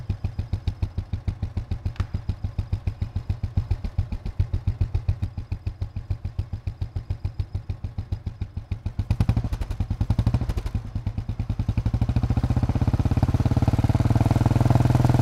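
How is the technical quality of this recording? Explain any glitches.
One glitch stands out. From 3.56 to 5.24 s there is a doubled audio track. A second, equally loud copy trails about 400 ms behind, starting and stopping abruptly. It is likely captured twice through a slower path.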